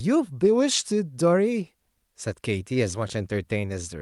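No technical faults can be heard anywhere in the recording.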